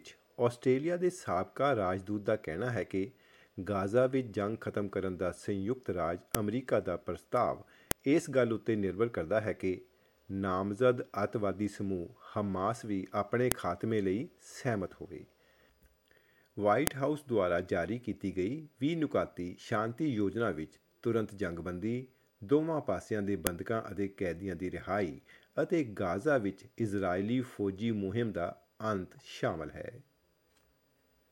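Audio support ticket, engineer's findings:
Sharp clicks at 6.35, 7.91, 13.52, 16.87, 23.47 s. File header played as audio: segments joined with WAV headers intact, header bytes decoding as samples.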